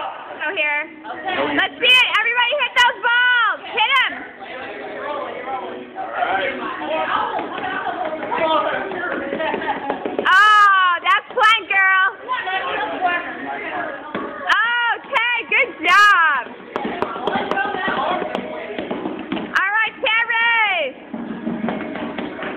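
Hard clipping runs through the whole clip. Some stage in the chain is being driven about 4 dB harder than it can pass, so whenever the waveform swings past that ceiling its tops are sliced flat. Only a small fraction of the samples reach the limit, so the damage is confined to the loudest peaks. There the squared-off edges throw energy high into the spectrum, and each peak carries a brief, gritty crackle rather than a continuous fuzz.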